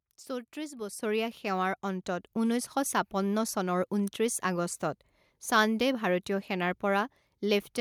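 At 1.02 s the whole signal jumps abruptly louder, by about 7 dB, with the voice and the background noise rising together in a single step rather than swelling gradually. This is a microphone volume stepped up fault. The call software judged the input too quiet and raised the microphone's hardware input level all at once. Because the change happens before any processing, everything the microphone picks up is lifted by the same amount at that instant.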